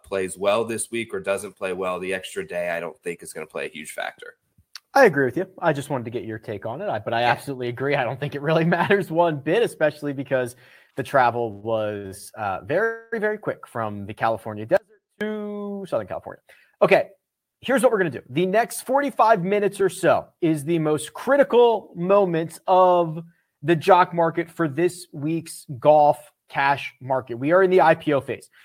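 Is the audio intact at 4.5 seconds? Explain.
Yes, the speech plays through cleanly at 4.5 seconds, with no dropout, click, distortion or other technical fault at that point.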